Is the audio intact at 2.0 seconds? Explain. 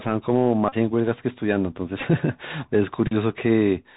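No. From 2.00 to 2.03 s there is a Bluetooth headset packet repeated fault. Roughly 18.8 ms of audio is lost across that 30 ms stretch, consistent with a handful of lost packets. Each gap is filled by decoding the previous packet's bits again. Runs of up to about 10 ms repeat every 3.75 ms, giving a short buzzy stutter near 267 Hz. A dropout would leave silence instead.

That moment also carries the Bluetooth CVSD headset codec damage heard throughout, which points to a 64 kbps CVSD headset link. Its one-bit up-or-down steps lag behind loud high sounds, so s sounds turn scratchy over a granular hiss. Nothing above 4 kHz gets through. The grain and slope distortion set it apart from plain low-pass filtering.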